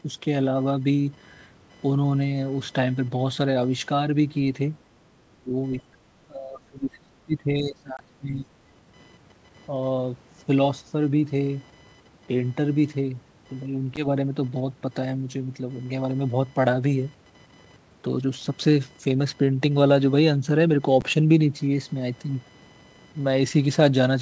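Throughout the clip, computer activity noise is present: processor or peripheral load disturbs the audio circuit's shared ground, putting a faint buzzing chirp at around 1 kHz underneath the speech, roughly 35 dB below it, rising and falling with the machine's activity rather than with the sound.

From 4.85 to 5.09 s, the background is gated by the echo canceller, which pulls the microphone down while the loudspeaker plays. The room sound dips by about 7 dB for roughly a fifth of a second, then comes back.

Speech suppressed in double talk follows at 5.37 to 5.55 s, 5.92 to 5.96 s and 6.27 to 8.52 s. The canceller, likely confused by both sides talking at once, clamps the talker. The voice drops by about 30 dB, then about 10 dB, then about 25 dB over two seconds.

Packet loss on an ADPCM call occurs at 7.97 to 8.00 s (20 ms lost, about two packets), 13.96 to 14.07 s (10 ms lost) and 21.01 s (10 ms lost). 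Each gap is a hard-edged silence. Because the decoder's predictor and step size lose step with the sender, the sound returns with a click or brief distortion before settling. The call microphone processing, with nothing above 8 kHz, and the G.722 coding both work normally.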